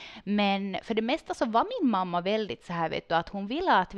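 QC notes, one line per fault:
No faults were heard in this speech recording. Nothing here needs a note.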